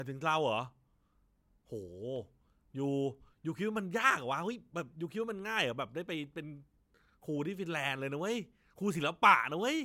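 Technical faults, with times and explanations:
No technical faults heard anywhere in the speech.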